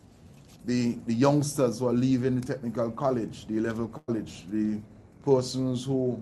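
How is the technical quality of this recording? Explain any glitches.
There's one real glitch, a burst of packet loss from 3.97 to 4.10 s. About 100 ms of audio got dropped, the receiver smeared the last sound over the hole, then faded it, leaving a brief dropout before playback jumped ahead. Everything sits on a call-codec sound topping out around 12 kHz, which points to Opus at roughly 40 kbps.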